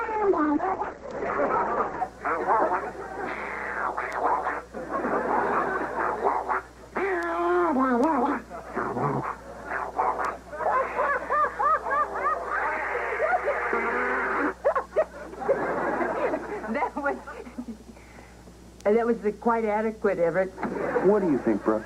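For the first 2 seconds the audio is band-limited, with nothing above about 8.6 kHz, and carries stronger coding artefacts. At 2.0 s it jumps abruptly to full, cleaner quality. This is an adaptive stream starting at a low bitrate. The player opened on a cheap rendition, one that sounds like Opus near 12 kbit/s, then switched up, to a level that points to roughly 64 kbit/s, once it had gauged the connection. A rebuffering stall would leave a silence or repeat at the switch. Here there is no gap at all.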